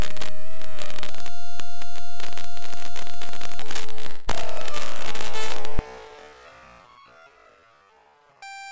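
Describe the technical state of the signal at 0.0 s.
At 0.0 s the audio is intact, carried through a WebRTC call path whose G.722 coding leaves nothing above 8 kHz.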